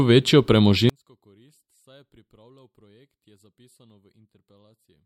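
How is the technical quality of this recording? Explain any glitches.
The recording has a serious fault. From 0.89 s to the end of the clip, the speech almost vanishes, dropping by about 38 dB to a faint residue. This is likely one channel inverted: with reversed polarity on one side, the near-identical speech cancels when summed to mono, leaving only the small differences between channels.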